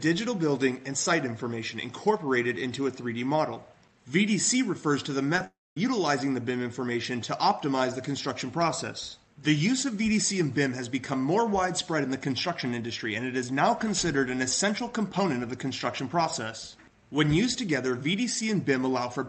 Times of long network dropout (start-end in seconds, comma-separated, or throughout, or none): 5.47-5.77